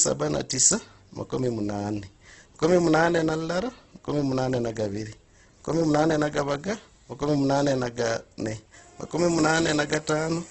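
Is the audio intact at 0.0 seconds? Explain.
No. At 0.0 s the speech already carries damage that runs through the whole clip, most likely Opus compression in its CELT music mode at a low rate, consistent with roughly 12 kbps. With too few bits, the encoder keeps each band's energy but fills the contents by folding lower bands or injecting noise, so voiced sounds come out rough and grainy rather than swirly. The band is limited to wideband, with nothing above 8.2 kHz, which dulls the top end.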